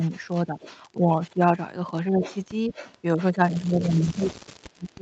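From 0.0 to 1.4 s the voice dips briefly, by about 5 dB over a fraction of a second in total. This is speech suppressed in double talk, likely an echo canceller turning the talker down while the far side also spoke. Overlapping it, from 0.03 to 1.35 s, a faint copy of the voice trails about 203 ms behind, roughly 25 dB below the speech. This is an echo leak, likely loudspeaker pickup that the canceller left in.

The same suppression returns from 2.1 to 2.71 s, now a deeper dip of about 10 dB lasting a short moment. From 2.23 to 3.61 s the delayed copy comes back, again about 203 ms late but clearer, around 15 dB below the voice. From 3.32 s to the end the suppression is severe, with the voice sinking by as much as about 30 dB.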